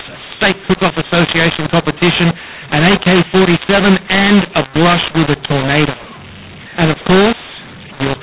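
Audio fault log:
Throughout: mu-law and A-law mixed up. The speech was encoded as G.711 mu-law but decoded as A-law, so levels get scrambled, some too loud and some too quiet. That's the harsh, gritty distortion you hear, plus the noise filling what should be quiet pauses.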